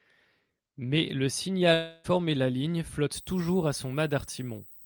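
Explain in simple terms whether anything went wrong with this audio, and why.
From 1.73 to 2.06 s the sound breaks off. A fading buzz fills the gap instead. This is a long network dropout, likely. About 0.3 s of audio never arrived, and the player papered over the hole. Speech returns at "la ligne".

After "la ligne", from 3.15 s to the end, a thin, high whine sits under the speech. This is USB whine. Electrical noise from a USB connection leaks into the audio at a fixed 8 kHz. It is strongest at 16 kHz. It stays well below the speech.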